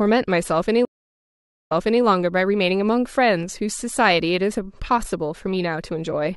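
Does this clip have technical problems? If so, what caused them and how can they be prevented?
Yes. A stream reconnect runs from 0.85 to 2.03 s: the connection broke, the audio went silent for about 0.84 s, and a fresh decoder picked up mid-stream. When the speech resumes, it starts about 0.34 s earlier than where it cut off, so a short stretch is heard twice. That repeat sets it apart from an ordinary dropout, which simply loses audio and carries on. A larger client buffer with seamless resume would prevent this.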